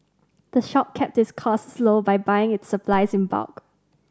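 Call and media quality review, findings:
DC step at 2.93 s: single low thump, speech continues uninterrupted. Probable converter recalibration or offset input switching in; baseline jumps about -25 dBFS, then sinks back through a 2 Hz high-pass, roughly 80 ms. Unlike a dropout, no gap; unlike a broadband click, energy stays low.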